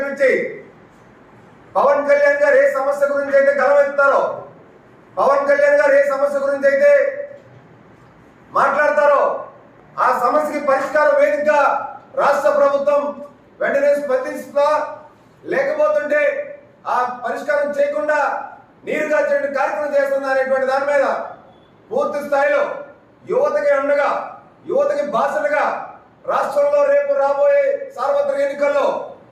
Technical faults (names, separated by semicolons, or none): none